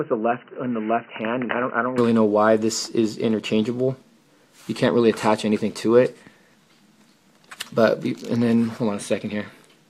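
From the start to 1.98 s the sound is dull and boxy, with nothing above 3 kHz, a few dB quieter, and carrying its own background noise a fair way under the signal. Then it opens up cleanly with no gap, so that's likely the input switched to a poorer device.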